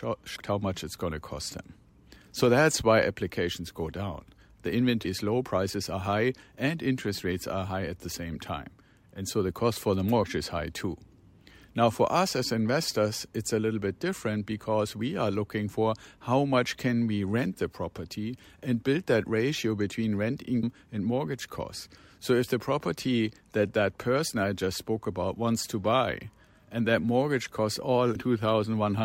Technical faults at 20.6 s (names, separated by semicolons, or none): damaged data in a compressed stream